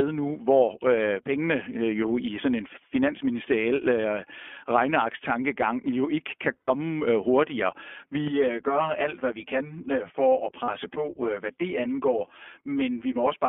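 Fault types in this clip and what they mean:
iLBC codec: speech is confined to about 250 Hz to 3.4 kHz and sounds plainly rough and synthetic throughout, unlike a clean telephone band filter.
Lost iLBC frames: at 6.59 s (100 ms) and 10.64 s (40 ms) the sound becomes a held, buzzy vowel, then recovers at once rather than smearing.
Channel delay (comb filtering): from 8.28 s to the end a delay of around 10 ms gives a hollow, phasey tone, with evenly spaced notches from near 40 Hz rather than band-edge dullness.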